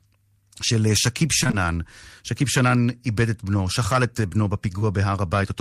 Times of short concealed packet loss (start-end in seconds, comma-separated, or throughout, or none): 1.43-1.55, 4.79-4.83